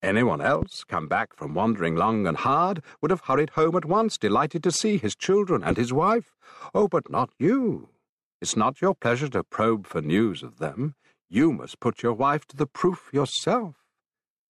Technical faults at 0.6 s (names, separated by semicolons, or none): loud pop